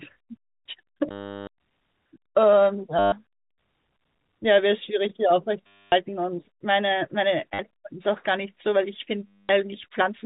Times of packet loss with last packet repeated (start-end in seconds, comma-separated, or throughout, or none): 1.11-1.47, 2.99-3.12, 5.67-5.92, 7.54-7.59, 9.27-9.49